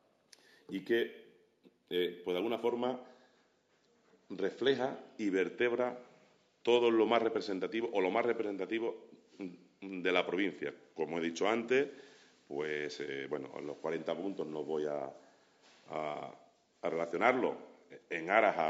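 From the start to 2.68 s there is imaging from linear upsampling. The sound points to a conversion from a 16 kHz rate up to 48 kHz using straight-line interpolation between samples. That is a weak filter. The top of the original band is dulled, and a faint mirror copy of the spectrum appears between 8 kHz and 16 kHz, roughly 35 dB below the signal. It is heard as a light metallic shimmer on bright, hissy sounds.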